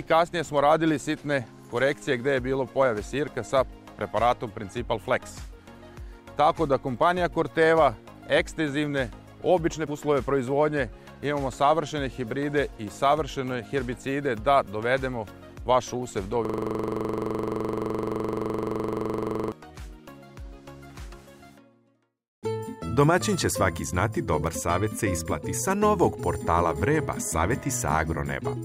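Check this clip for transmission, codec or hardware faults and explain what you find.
There is a system hang loop from 16.45 to 19.52 s. The host froze while the audio hardware kept replaying one ring buffer, so a 42.67 ms slice, which fits a 2048-sample buffer, repeats about 72 times, giving a rough 23.4 Hz buzzing stutter.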